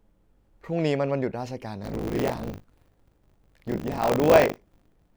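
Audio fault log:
1.82–5.16 s, buffer tearing: a persistent robotic 50 Hz buzz rides on the speech, only while signal is present. Writer and reader pointers have slipped, so roughly a third of each 20 ms period replays audio about 40 ms old, hard-spliced on both sides.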